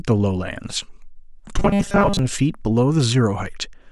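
From 1.59 to 2.19 s, new audio likely stopped arriving in time, so the playback side kept re-sending its last fragment of roughly 5 ms instead of the real signal, producing robotic sound from repeated short buffers. Across most of that stretch the genuine speech is skipped, and the looping imposes a fixed 200 Hz pitch. The voice collapses into a stiff, metallic buzz that only loosely traces the syllables before normal speech returns.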